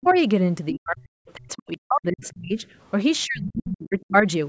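From 0.01 to 0.15 s, a faint second voice sits about 30 dB below the speech. This is the other side's voice leaking through, likely loudspeaker echo the canceller left behind. Within 0.03 to 0.15 s, the talker's own voice dips by about 20 dB. Between 0.71 and 1.0 s, it drops by up to about 40 dB. This is speech suppressed in double talk, likely the canceller turning both sides down together. Unlike leakage, the main voice itself thins and cuts out. A brief scrap of the other voice, about 35 dB down, returns at 1.28 to 1.33 s. Suppression then hollows out the main voice across 1.35 to 2.65 s, while another leaked scrap, about 30 dB down, comes through at 2.21 to 2.33 s. A final deep dip of the main voice, up to about 40 dB, follows from 3.25 to 4.15 s.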